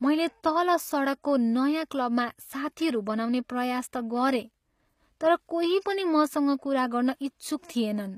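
HE-AAC compression, throughout: treble stops at 15.5 kHz and s sounds turn gritty and lispy, likely from spectral band replication copying lower bands upward.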